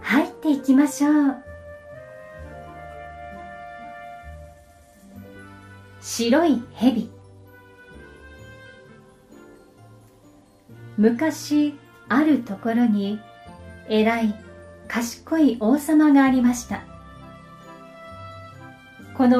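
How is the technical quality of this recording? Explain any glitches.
There's one glitch worth flagging: a call bitrate drop from 2.08 to 3.65 s. The bandwidth estimate fell, so the encoder coded far more coarsely, which fits a fall from around 64 to 28 kbps, bottoming out for about 1.5 s. It sounds rougher and muffled, with the top end dulled, until recovery.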